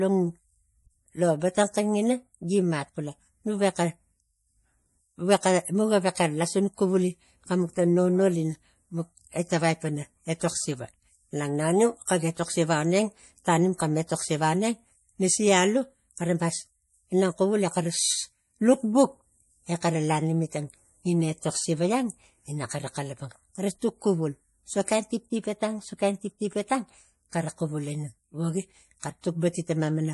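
Throughout the speech, the sound is watery and swirling, with smeared consonant onsets, likely from MP3 compression at a bitrate around 48 kbps. On a spectrogram, nothing appears above 11.5 kHz, and the weaker upper bands flicker on and off in patches.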